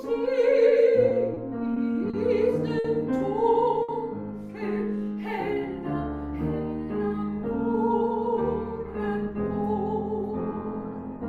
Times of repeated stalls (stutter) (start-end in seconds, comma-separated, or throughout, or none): 1.09-2.15